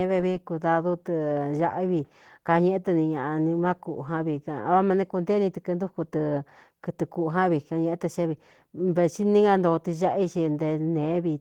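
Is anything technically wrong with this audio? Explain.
Yes. Opus voice compression is audible throughout the speech, and the damage is plain. The codec appears to run in hybrid mode. A linear-prediction layer codes the band below 8 kHz, and a transform layer codes everything above it. Content still reaches about 20.1 kHz, so the band was not narrowed. The artefacts instead point to a low rate, around 16 kbps, in 20 ms frames. At that rate the excitation is coded coarsely. The voice sounds hoarse and slightly robotic.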